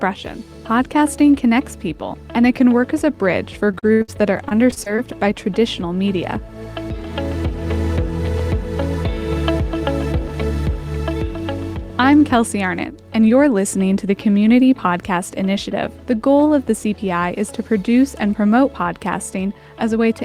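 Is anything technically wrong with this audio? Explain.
Yes, there are two faults.

From 3.71 to 5.32 s there is repeated packet loss (robotic sound): eleven gaps, the longest 72 ms, each patched by extending the previous sound. This gives a choppy texture with pieces missing. The spectrogram shows repeated, smeared frames breaking the harmonics.

From 7.50 to 10.29 s a jitter buffer speed-up trims short pitch-period pieces, around 50 ms in all, to shed excess delay. The audio runs at 102% speed with unchanged pitch. Events sit marginally closer together, with tiny splices visible in the waveform.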